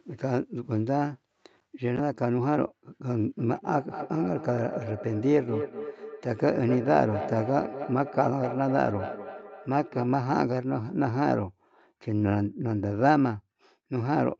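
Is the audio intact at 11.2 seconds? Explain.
Yes, the speech at 11.2 seconds is intact, with no dropout, glitch or distortion at that moment.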